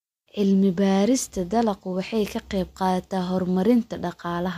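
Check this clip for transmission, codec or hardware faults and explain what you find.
No transmission, codec or hardware fault can be heard in this speech recording; the signal arrives intact, with no dropouts, distortion or other technical damage anywhere in it.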